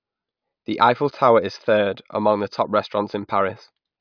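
No technical faults can be heard anywhere here.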